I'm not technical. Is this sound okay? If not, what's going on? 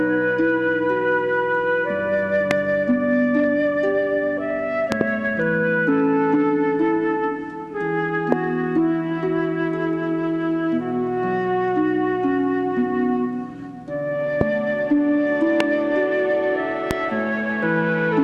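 No. A sudden electrical jolt, likely from a plug, switch or static, gets added to the sound, causing a loud pop: a sharp thump with the audio continuing underneath. This happens at 2.51–2.53, 4.92–5.03 (two quick pops), 8.32–8.35, 14.41–14.43, 15.60–15.63 and 16.91–16.93 seconds.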